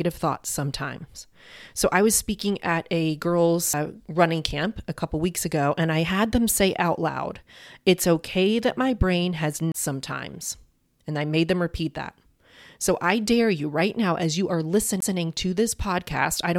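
At 3.73 s, 9.72 to 9.74 s and 15.00 s the speech shows a CD skip: the laser jumps tracks, leaving a tick and a brief mute before playback resumes elsewhere on the spiral. Unlike a plain dropout, the speech continues from a displaced point.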